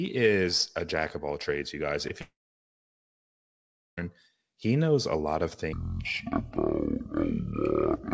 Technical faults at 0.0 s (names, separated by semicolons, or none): none